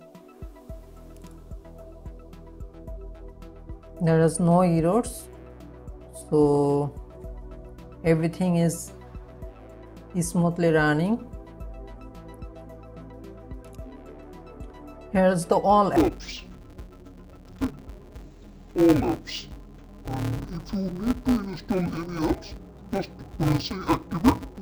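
From 15.96 s to the end at 24.61 s, interleaved audio is read as planar: each block of alternating left and right samples has its first half taken as left and its second half as right, so both channels play at half speed while the overall pace holds. The blocks here are short, about 5.33 ms, which fits a 256-sample block. The sound turns dull and robotic, with a buzz at 188 Hz and no clear octave drop.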